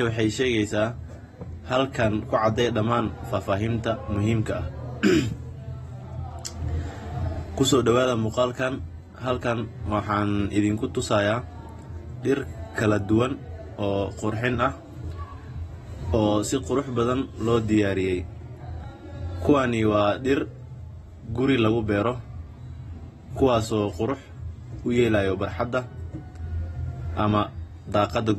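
From start to finish, the speech sounds dull and smeared. Nothing is present above 12.4 kHz, so the top of the spectrum is simply missing. The damage is plainly audible. This is likely AAC compression, of the AAC-LC kind, at a low rate that fits about 32 kbps. The encoder quantises each frame's frequency lines coarsely to save bits. It drops the highest band entirely and thins what remains. Sibilants lose their crispness and take on a smeared edge.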